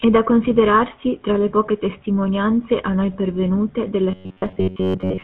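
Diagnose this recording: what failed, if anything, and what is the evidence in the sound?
The whole recording has a plainly audible buzzy, gravelly roughness, with nothing above about 4 kHz. That points to the codec stage, specifically the GSM full-rate codec, at a rate that fits its 13 kbps. This codec models the vocal tract and excites it with a coarse, regularly spaced pulse train that keeps only part of the excitation detail. That grain sits over the speech throughout, and the hard band limit removes all upper brightness.

From 4.11 s to 5.23 s the speech turns into a rigid, metallic drone at about 94 Hz. It still loosely follows the speech's rhythm. This is likely robotic sound from repeated short buffers at the driver or buffer stage. Audio arrived too seldom, so the same fragment of roughly 10.7 ms was replayed over and over in place of most of the real signal, and that fixed repeat rate sets the buzz pitch.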